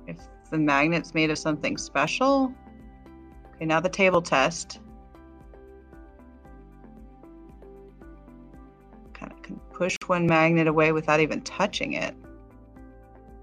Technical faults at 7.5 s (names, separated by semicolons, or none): none